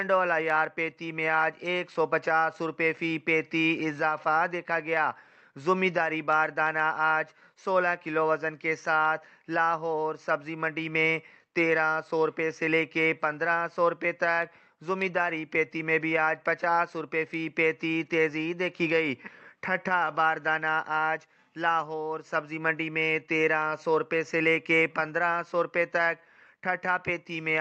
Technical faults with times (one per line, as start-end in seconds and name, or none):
none